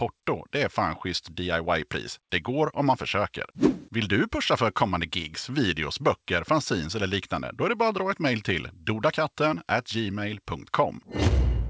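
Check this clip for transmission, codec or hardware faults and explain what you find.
No faults can be heard in this speech recording.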